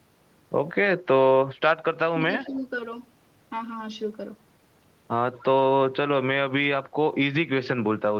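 Speech suppressed in double talk, 2.1 to 2.2 s: the speech dips by roughly 10 dB for about a tenth of a second. This is likely an echo canceller that heard both ends talking at once, could not separate near speech from loudspeaker echo, and turned everything down.

Echo leak, 2.44 to 2.49 s and 5.34 to 5.44 s: a faint, delayed copy of the speech arrives 176 ms behind the original, roughly 25 dB below it, in short scraps. It is likely loudspeaker sound that the far end's echo canceller failed to remove.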